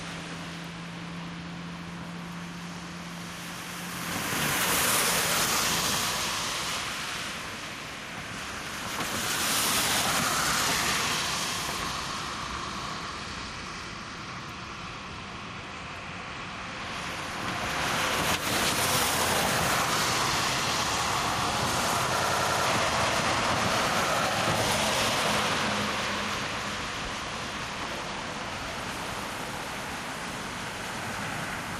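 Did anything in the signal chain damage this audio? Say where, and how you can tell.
Yes, two things. Throughout, the level pumps: it ducks by around 10 dB under each loud sound, so loud and quiet parts sit squashed close together. That's gain pumping, and it sits at the analogue input stage. The likely cause is the mic gain set far too hot, with a fast limiter or compressor slamming it back down on every peak and releasing between them.

The second is a system hang loop at the driver/buffer stage, from 22.20 to 22.66 s. A single 93 ms slice of audio repeats exactly five times, giving a machine-gun stutter at about 10.8 Hz, which fits a 4096-sample buffer. The driver or machine froze while the hardware kept cycling that same ring buffer, so about half a second of real audio never got captured.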